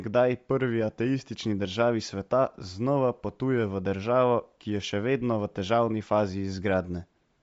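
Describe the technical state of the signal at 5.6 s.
At 5.6 s the speech carries the same damage heard across the whole clip. It sounds like Bluetooth LC3 compression, likely from an LE Audio link. Nothing reaches above about 7.7 kHz. The top of the band is thin and filled with a grainy, breathy hiss. The codec works in short transform frames, consistent with 10 ms, and the damage fits a rate near 32 kbps.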